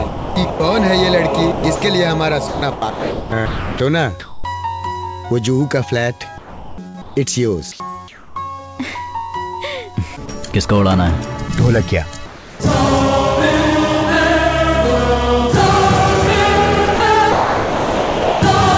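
A call recording whose bandwidth stops at 8 kHz, which fits a G.722 path, shows sound chopped by the voice detector at 0.08–0.60 s, 1.52–4.44 s, 10.26–10.54 s and 16.86–18.42 s, likely from discontinuous transmission gating. Quiet edges drop into synthetic fill. At 6.38–8.36 s and 12.26–12.60 s there is comfort noise in place of the background, likely from the sender pausing transmission. The real ambience gives way to smooth, featureless hiss, about 2 dB quieter at 12.3 s, unlike the rapid switching of chopping. A burst of packet loss at 6.88–6.96 s stretches the last sound for about 60 ms, fading as it goes, then jumps ahead past roughly 60 ms of missing audio, an actual skip rather than substituted background.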